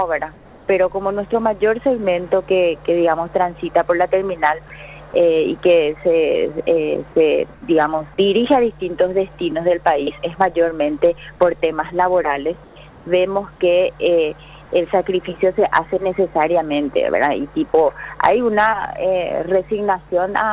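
Discontinuous transmission likely cut the sender off in pauses, so the receiver filled them with comfort noise in place of the background at 0.34–0.68 s, 7.54–7.62 s, 12.64–12.76 s and 12.90–13.06 s. The real background becomes a flat, featureless hiss, about 1 to 8 dB quieter, in a call path whose top end stops at 4 kHz, which fits G.711 A-law.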